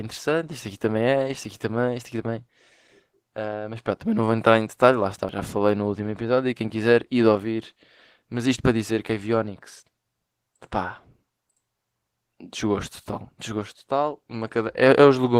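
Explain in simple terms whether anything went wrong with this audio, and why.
Yes, two things went wrong. First, Opus voice compression squeezed the speech into very little data, coding its fine detail coarsely, so the voice sounds noticeably rough, hoarse and slightly robotic throughout. Second, at 5.29 s there is audio missing between chunks, likely from the recorder losing a piece while switching to a new six-second chunk; about a twentieth of a second vanishes, heard as a sudden skip.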